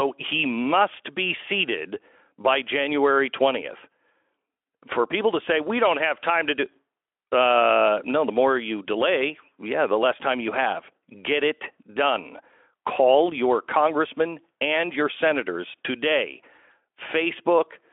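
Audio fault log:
No faults heard anywhere in this speech recording.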